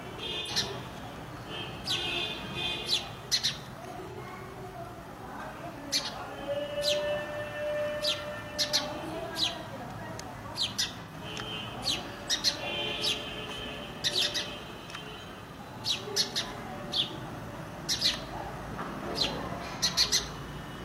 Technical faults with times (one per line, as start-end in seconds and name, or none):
0.39-0.51 AAC frame loss with concealment
4.10-4.17 AAC frame loss with concealment
11.01-11.12 AAC frame loss with concealment
19.76-19.82 AAC frame loss with concealment